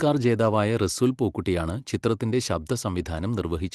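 No technical faults are audible.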